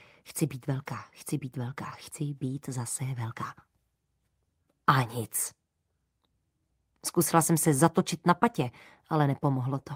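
No technical faults can be heard anywhere in this recording.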